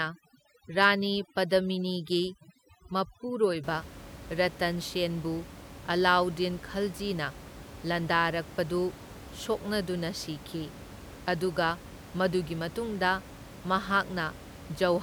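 From the start to about 3.64 s, overdone noise removal cuts any frequency band near the noise estimate, taking quiet speech detail with it. Gaps fall silent except for twinkling specks. A spectrogram shows scattered isolated dots and holes in the harmonics where the room noise, about 17 dB below the speech, should be.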